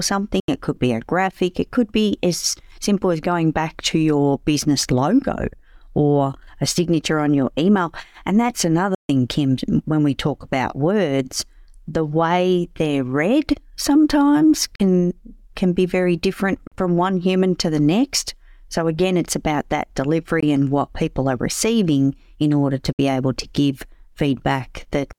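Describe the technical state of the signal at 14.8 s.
At 14.8 s the speech drops out from 14.76 to 14.80 s, just after "way they're read sometimes". This is a Bluetooth dropout, likely caused by audio packets arriving at the headphones too late and being discarded. The output falls silent for about 41 ms, which fits roughly two lost packets. The speech resumes further along, as though it had continued through the silence.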